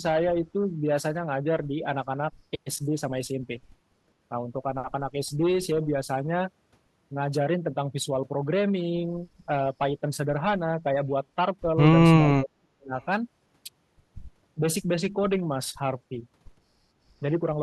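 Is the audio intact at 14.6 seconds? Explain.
No, not quite. Between about 14.55 and 14.63 s the speech dips briefly, dropping by roughly 15 dB at its deepest before coming back. It's short, about 70 ms in all. This is speech suppressed in double talk, likely from an echo canceller that couldn't separate the near talker from the loudspeaker echo while both sides were talking, so it turned the talker down along with the echo.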